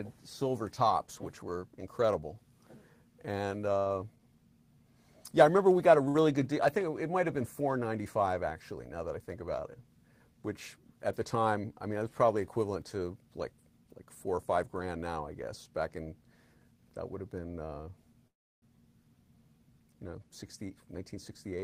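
At 6.08 to 6.18 s there is a short stall from a late packet. A packet missed its playout deadline and the jitter buffer ran dry, so the receiver stretched the last bit of sound for about 63 ms until the packet turned up. It then resumed from the same point, so nothing is lost and the delay grows by those 63 ms. To the ear, one sound hangs on a little too long, with a slight buzz or dip.

From 11.36 to 11.97 s comes a jitter buffer speed-up. The buffer had built up more audio than its target, so the receiver trimmed many small pitch-period-sized slices in a row, removing around 70 ms in total. Playback runs at about 109% speed over that stretch. The pitch stays the same, but the sound sounds slightly rushed.

At 18.28 to 18.65 s the audio freezes. The likely cause is packets held up in transit, leaving the jitter buffer empty. The last sound is carried on briefly and then drops to silence for about 330 ms of the 344 ms gap. 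Playback then picks up where it stopped, so a pause has been inserted and nothing is missing.

A second jitter buffer speed-up runs from 20.43 to 21.58 s. The receiver again drains the surplus by cutting out short periodic slices, about a tenth of a second in total. This gives roughly 108% speed at unchanged pitch, and the audio sounds slightly hurried up to the end.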